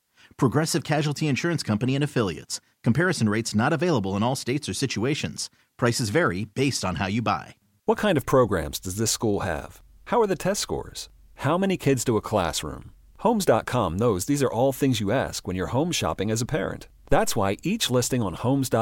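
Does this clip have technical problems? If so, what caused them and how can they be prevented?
Yes. A deep thump lands at 17.12 s and fades by 17.55 s, peaking around -14 dBFS and decaying in roughly 97 ms. This is a phantom power thump: the supply was switched on a live input, and the voltage step passed through the coupling capacitors. Prevent it by muting the channel before switching phantom power.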